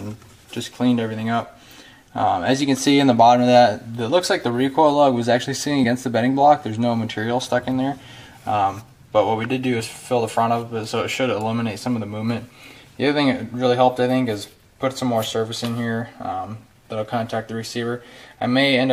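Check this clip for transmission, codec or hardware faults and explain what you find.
One fault: compressed frames skipped at 5.83–5.85 s. About two frames, roughly 50 ms, go missing (consistent with 23.2 ms frames), so the audio jumps ahead at that point, leaving a visible spectrogram discontinuity.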